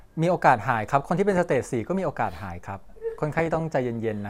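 Burbling breaks over the speech from 1.32 to 1.64 s and again from 3.32 to 3.60 s. This is DAB burbling: bit errors, around half a percent, then about a fifth, slip past error correction and corrupt MP2 sub-band levels frame by frame.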